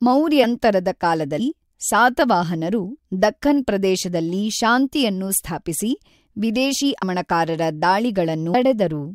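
Speech recording with compressed frames skipped at 8.53 s, near the end. About ten frames of roughly 21 ms each are missing, so around 300 ms of audio vanishes and the speech jumps forward. On a waveform or spectrogram, the envelope and harmonics change abruptly at that point.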